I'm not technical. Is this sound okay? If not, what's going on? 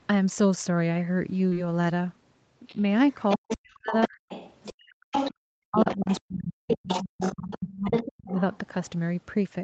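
No. At 1.49 to 1.55 s there is short concealed packet loss. A bit of the call arrived too late, and the gap was patched over, leaving a brief smear.

The other side's voice leaks through, likely from a loudspeaker echo the phone didn't fully remove. You can hear it at 2.67–3.57, 3.95–4.73, 5.12–5.34, 5.75–6.20 and 6.68–8.58 s.

The speech is also suppressed in double talk. Likely because both sides talk at once, the main voice drops away or cuts out at 3.37–4.17, 4.72–5.13 and 5.67–7.93 s.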